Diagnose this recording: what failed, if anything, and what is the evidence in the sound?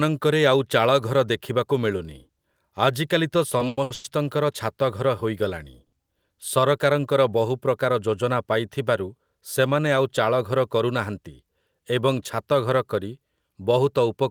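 Repeated stalls (stutter) between 3.57 and 4.06 s point to the network and jitter-buffer stage. Packets arrived late four times in that half-second. Each time the receiver held and extended the last sound, so about 290 ms of filler makes up roughly 59% of the span, and the longest hold is 100 ms. Nothing is skipped, so the speech drags and catches rather than jumping. That distinguishes it from packet loss, where content disappears.

A short stall from a late packet at 5.86 to 5.94 s comes from the same network and buffer stage. One packet missed its slot, and playout delay rose by 60 ms. The receiver stretched the preceding sound for 60 ms, then resumed exactly where it left off. The result is a single held sound with a faint buzz or dip. Unlike a dropout there is no silence and no missing audio, and unlike the stutter it happens only once.

Jitter buffer speed-up runs from 10.84 to 11.29 s, again at the network and buffer stage. 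The buffer was fuller than its target. The receiver trimmed pitch-period slices, about 50 ms in total, so the speech plays at 109% speed and sounds hurried. Pitch stays unchanged, which rules out a clock or sample-rate mismatch, because those shift pitch along with speed.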